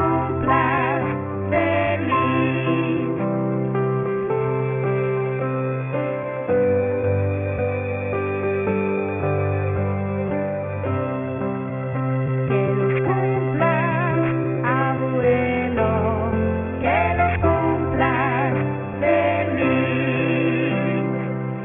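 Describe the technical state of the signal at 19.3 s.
At 19.3 s the sound carries aliasing, present across the whole clip. The rate appears to drop from 48 kHz to 6 kHz without filtering first. Content above 3 kHz folds back below it as gritty, metallic, unrelated tones, roughly 15 dB under the signal.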